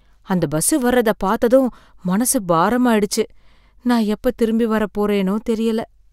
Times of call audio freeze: none

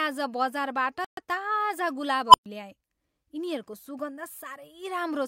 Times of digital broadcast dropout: 1.05-1.22

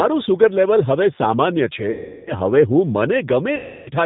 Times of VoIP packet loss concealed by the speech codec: 1.91-2.34, 3.56-3.89

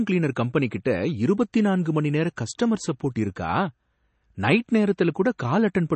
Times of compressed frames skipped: none

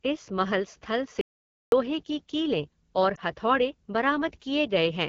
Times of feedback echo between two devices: none

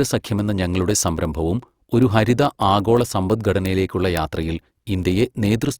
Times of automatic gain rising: none

